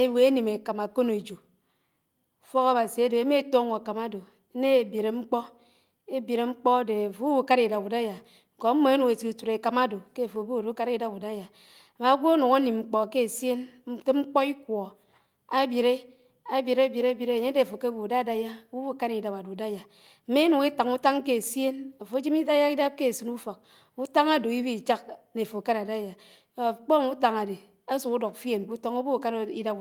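Nothing technically wrong turns up anywhere in this speech recording, so there's nothing to flag here.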